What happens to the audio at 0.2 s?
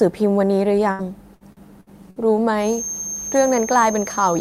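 Nothing goes wrong at 0.2 s; the speech carries on intact there, with no dropout, click, distortion or other fault.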